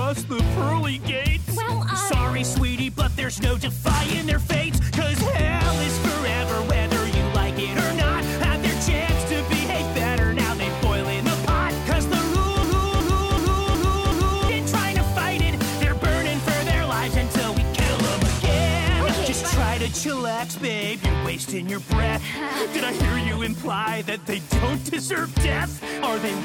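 A system hang loop runs from 12.63 s to 14.49 s: the same 371.52 ms slice of sound repeats exactly five times, a stutter at about 2.69 Hz. It points to a frozen driver or computer while the hardware kept replaying a ring buffer of 16384 samples, and roughly two seconds of audio never arrive. On a waveform the five segments are identical copies, and a spectrogram shows the same pattern stamped in repeating vertical blocks, each boundary marked by an abrupt seam.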